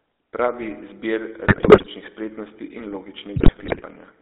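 Throughout, the speech has the buzzy, gravelly texture of the GSM full-rate codec, which fits a 13 kbps stream. The voice is rebuilt from a vocal-tract model driven by coarse pulses. The band runs from 300 Hz to 3.7 kHz, so it sounds thin and rough.

From 1.46 to 1.87 s, just before "spretnosti in", GSM bit errors break the voice into squawks and gargling. Corrupted filter, pitch and gain values warp each frame. The same happens from 3.36 to 3.82 s, right after "spretnosti in". Each burst suggests roughly twenty damaged frames.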